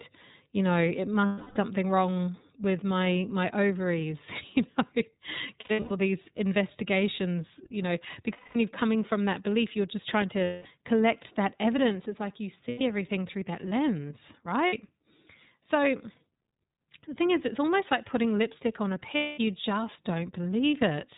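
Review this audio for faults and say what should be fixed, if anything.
The whole clip of speech is carried by the iLBC codec. Everything above 4 kHz is missing, and the voice has a rough, synthetic edge, which fits iLBC's 13.33 kbps mode with 30 ms frames. Band-limiting alone would keep the voice smooth. Fix it with a wideband codec such as Opus.

There are lost iLBC frames at 1.26 s (300 ms, after "know it"), 5.6 s (240 ms lost in short bursts across 300 ms), 8.34 s (210 ms), 10.44 s (210 ms, after "belief you're just trying"), 12.68 s (120 ms, before "everything through that lens"), 14.67 s (60 ms) and 19.16 s (210 ms). In each gap the decoder repeats the last pitch cycle mixed with noise, so you hear a held, slightly buzzy vowel, fading over the longer losses. This differs from plain dropouts because the gap is filled rather than left empty, and the voice is right again almost at once. 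Prevent it with a jitter buffer and forward error correction.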